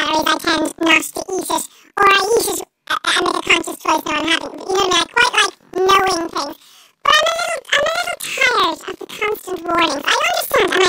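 From start to finish, the speech sounds an octave high and carries a rapid flutter at about 23.4 Hz, yet its overall pace stays normal. This is planar audio read as interleaved. Each block of about 42.67 ms, which fits a 2048-sample block, stores all the left samples and then all the right. Reading that block as alternating pairs plays the left half and then the right half, each at double speed. The doubling lifts the pitch by 12 semitones, and the switch at every block boundary produces the flutter.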